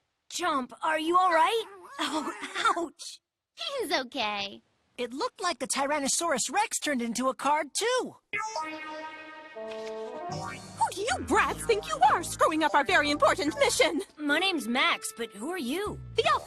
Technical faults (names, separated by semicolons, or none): none